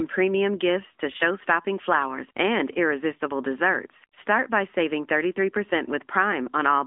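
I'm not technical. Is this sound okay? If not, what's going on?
No. For the whole clip, the speech has been through the AMR narrowband mobile codec, the old phone-network coding. It keeps only roughly 250 Hz to 3.6 kHz, with nothing above 3.7 kHz, so it sounds muffled and thin, and the compression adds a clearly audible buzzy, synthetic edge.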